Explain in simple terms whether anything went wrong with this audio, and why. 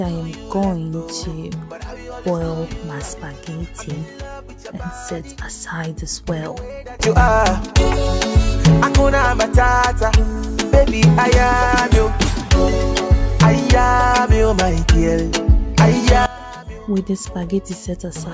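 Nothing went wrong here.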